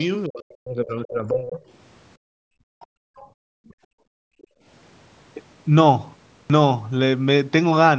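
A speech recording made on a call, band-limited with nothing above 8 kHz, with four distinct faults. Faint scraps of a second voice, about 30 dB below the talker, appear at 0.00–0.04 s, 2.80–2.87 s and 3.16–3.28 s, plus a weaker one at about 35 dB down at 4.42–4.47 s; this is likely the other side's voice leaking through from the loudspeaker past an incomplete echo canceller. From 0.27 to 1.6 s the talker's voice sinks and breaks up, dropping by roughly 30 dB at worst, most likely speech suppressed in double talk as the canceller ducked both voices together. Between 2.17 and 4.64 s the room background falls away, by about 36 dB at its deepest and for around two seconds in total, as the echo canceller gated the microphone while the far end played. At 6.46 s, after a 0.37 s pause, the sound begins abruptly with about 39 ms missing, a clipped start caused by the output device waking up too slowly.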